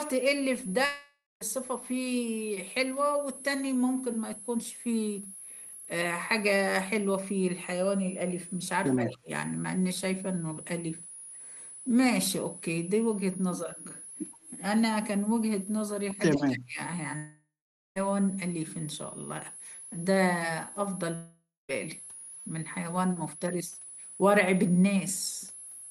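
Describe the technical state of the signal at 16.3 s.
Echo leak, 16.30 to 16.44 s: a faint, delayed copy of the speech arrives about 113 ms behind the original, sitting roughly 20 dB below it. It sounds like a brief ghost trailing the talker. The likely cause is a far end playing the call over a loudspeaker, with its echo canceller failing to remove everything its microphone picked up, so a residue was sent back down the line.

Speech suppressed in double talk, 16.34 to 16.79 s: overlapping the echo, the speech level collapses by as much as about 30 dB for roughly half a second, so the voice dips before recovering. This likely happened because both sides were active at once and the echo canceller, unable to separate the local talker from the returning echo, attenuated the whole signal rather than just the echo.

Switching supply whistle, present throughout and therefore also at 16.3 s: a high tone near 10 kHz wanders between about 9.8 and 11.0 kHz, sitting roughly 15 dB below the speech. 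It comes from a switching power supply running in an audible burst mode or beating against another supply.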